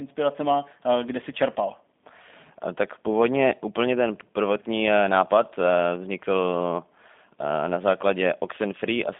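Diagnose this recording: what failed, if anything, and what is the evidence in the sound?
The speech passed through a G.729 codec for the whole clip. It was rebuilt from a vocal tract filter, pitch predictor and sparse pulses, which fits the 8 kbit/s G.729A variant. Nothing sounds above 3.7 kHz, the line band runs 200 Hz to 3.6 kHz, and clearly audible roughness gives the voice a synthetic edge.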